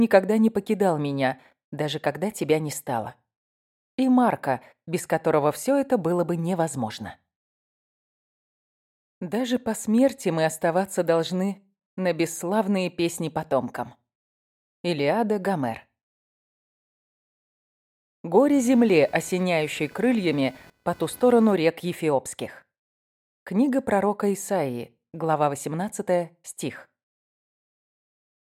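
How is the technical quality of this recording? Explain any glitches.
There's one glitch worth flagging. From 18.52 to 21.54 s you get computer activity noise: processor or graphics load shifting the shared audio ground, heard as a buzzy chirp pulsing around 500 Hz, roughly 30 dB under the sound.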